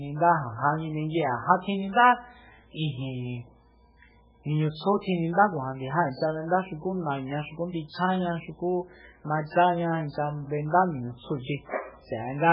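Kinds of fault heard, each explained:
MP3 compression: The speech has nothing above 5.2 kHz and heavy codec damage throughout, which fits a very low bitrate near 8 kbps and is likely caused by MP3 encoding. Starved of bits, the encoder cuts the treble at a fixed point and drops weak frequency lines that flicker in and out between frames. That flicker gives a watery, swirling texture, which separates it from a plain low-pass filter that would only sound dull.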